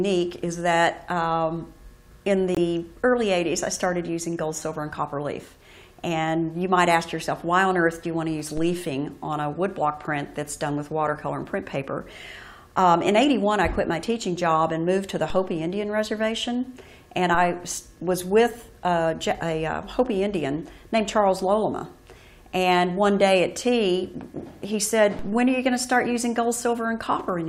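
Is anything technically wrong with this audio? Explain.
Yes. At 2.55 to 2.59 s the sound drops out abruptly into a short silence of about 38 ms, a corrupt frame muted. Damaged compressed data was rejected by the decoder and replaced with silence, a gap that fits two lost frames, with the timing afterwards unchanged.

A low thump or click occurs at 8.57, 15.30, 17.35 and 25.19 s while the sound continues unchanged. Each is a DC step: the waveform's zero line suddenly jumps, then the offset drains away through a roughly 2 Hz high-pass, fading over a fraction of a second.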